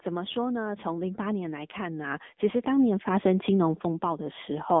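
Speech heard through an AMR narrowband mobile codec, with automatic gain rising across nearly the whole clip. The band runs from roughly 200 Hz to 3.6 kHz, and nothing passes above 3.8 kHz. A plain telephone-style filter would give the same narrow band, but the clearly audible buzzy, synthetic texture points to the codec itself. That texture comes from the voice being rebuilt from a vocal-tract model fed by sparse pulses, which fits a low AMR-NB mode around 8 kbit/s. From 0.05 s to 4.56 s, the automatic gain rising lifts the level by about 11 dB in a slow, steady swell. The background noise climbs together with the voice, and that separates it from a talker simply speaking louder or moving closer to the microphone, where only the voice would grow. The gain control has judged the input too quiet and keeps raising its gain over several seconds.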